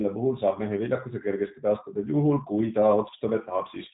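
A speech recording runs through the G.729 codec for its entire length, and the damage is plainly audible. Everything above about 3.8 kHz is gone, leaving a narrowband telephone sound. The voice is rebuilt from a vocal-tract filter, a pitch predictor and a sparse pulse excitation rather than carried as a waveform, so it comes out slightly rough and synthetic. The thin, buzzy quality fits a coder running at around 8 kbit/s.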